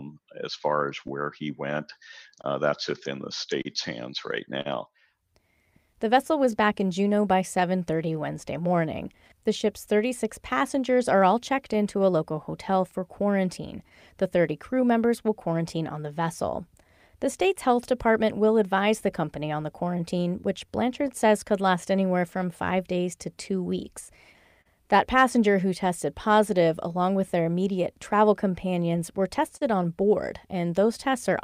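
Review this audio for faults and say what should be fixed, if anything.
Clock drift between sender and receiver: the sender's audio clock runs roughly 3 percent slow against the receiver's, so the jitter buffer keeps draining throughout the speech and the receiver must keep stretching the stream to avoid running dry. Lock both ends to a common clock or use adaptive resampling that follows the drift.

Repeated timing corrections from 0.14 to 31.29 s: the receiver inserts short repeated pieces again and again, all in the same direction, playing the speech at 98 percent speed and adding around half a second overall. Replace the crude inserts with smooth, continuous resampling.

Scattered short gaps from 0.59 to 21.10 s and from 24.17 to 29.63 s: isolated packets arrived late or not at all, around twenty holes in the first stretch and seven in the second, none longer than about 40 ms. Each was patched by extending the preceding sound, leaving brief ticks and smears. 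Enlarge the jitter buffer or add forward error correction.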